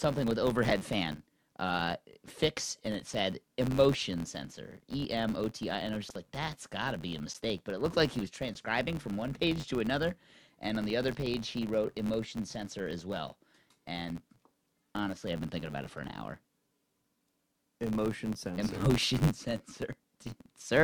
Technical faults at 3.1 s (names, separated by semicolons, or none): filter restarted on every block